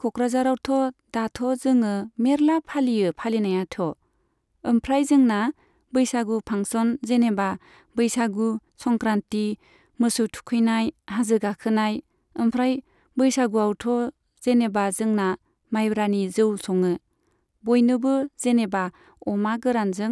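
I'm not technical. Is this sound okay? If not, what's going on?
Yes, nothing sounds wrong with this recording.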